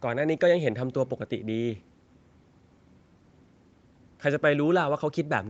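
No technical faults can be heard in the speech. It has passed through call microphone processing and a WebRTC call path, so nothing reaches above about 8 kHz and the lowest bass is trimmed away, both of which are normal for a call.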